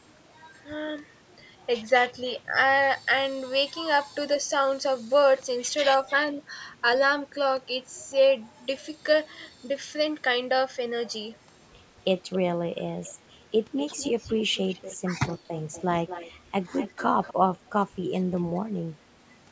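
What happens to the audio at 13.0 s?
Right around 13.03 to 13.14 s there's a brief echo leak: a faint, delayed copy of the speech slips in for about a tenth of a second, trailing the original by roughly 274 ms and sitting well down, around 25 dB below the direct speech. The likely cause is a far end playing the call on a loudspeaker, where its echo canceller didn't fully scrub what the microphone caught, so a scrap got sent back.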